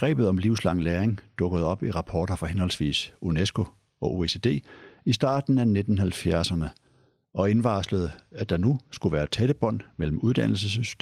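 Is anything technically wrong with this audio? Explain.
Yes. The speech has three lost packets rebuilt from error correction. At 5.29 to 5.35 s, and again at 8.51 to 8.53 s between "og indvarslede at" and "nu skulle være tætte", packets went missing. The following packet carried a low-bitrate backup copy, which the decoder played in their place. The first stretch points to two lost 20 ms packets, the second to one. Nothing drops out, but those moments sound briefly rougher and noisier.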